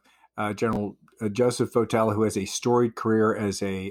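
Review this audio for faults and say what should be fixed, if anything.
At 0.73 to 0.77 s there's a chunks-out-of-order glitch: one roughly 12 ms block plays two blocks late, so the speech jumbles briefly. Fix it by sequencing buffers with timestamps or a reorder queue before writing them out.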